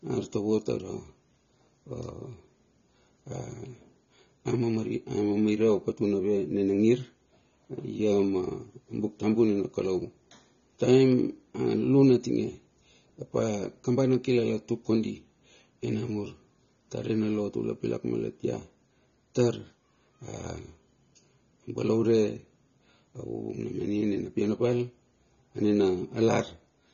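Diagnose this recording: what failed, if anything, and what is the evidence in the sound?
Throughout the speech, the sound is dull and smeared, with nothing above 7 kHz and a warbling, fizzy edge on sibilants. That points to the codec stage, likely AAC compression: AAC-LC at a bitrate fitting about 24 kbps cuts the top band and coarsely quantises what remains.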